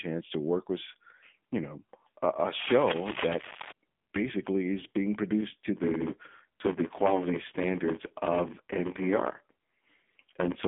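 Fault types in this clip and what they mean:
AMR narrowband mobile codec: The speech sounds thin, buzzy and synthetic throughout, confined to a telephone band of roughly 200 Hz to 3.6 kHz, with nothing at all above 3.7 kHz. The codec damage is heavy, which fits a low bitrate around 6.7 kbps. AMR-NB samples at 8 kHz and rebuilds the voice from a vocal-tract model fed by a few pulses per 5 ms subframe. At so few bits, that model loses naturalness and the voice takes on a mechanical edge.
Cable scratch noise: From 2.53 to 3.71 s, just before "basically is being produced", dense, uneven crackling and rustling sits over the speech, nearly as loud as the voice itself. The likely cause is a worn cable, connector or control being moved. Its contact resistance jumps around rapidly as it shifts, injecting irregular bursts of noise for as long as the movement lasts.
Block size mismatch (padded): From 5.75 s to the end, starting right after "is being produced to", a steady buzz at about 93.8 Hz appears. 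The speech also drags, running at about 0.86 times normal speed while keeping its timbre. One stage delivers shorter blocks than the next one reads, which fits a 512-sample read. Each block's shortfall is filled with silence, so a tiny gap recurs at the block rate, causing both the buzz and the slowdown.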